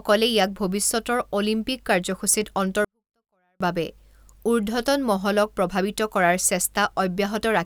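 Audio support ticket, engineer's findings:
Speech drops out 2.85–3.61 s: 24-bit alignment error (too quiet). Level falls about 48 dB at once, audio clean but near inaudible. Probable component: sample-format conversion. 24-bit samples sitting in the low bytes of 32-bit words, read as full 32-bit integers. Waveform: sudden near-flat band; spectrogram: same spectral shape, much fainter, sharp edges both ends.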